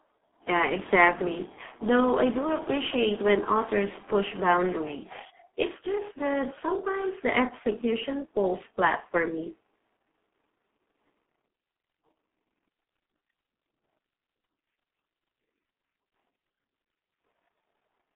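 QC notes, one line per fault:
Throughout, G.723.1 codec: the speech is boxed into a narrow telephone band, roughly 250 Hz to 3.6 kHz, with nothing at all above 3.8 kHz, so it comes across muffled and thin. The damage is heavy. Consonants smear and there's a hoarse, rough edge, which fits a very low rate of about 6 kbit/s. The codec works in 30 ms frames and updates its model of the voice slowly, so quick changes in the speech get blurred over.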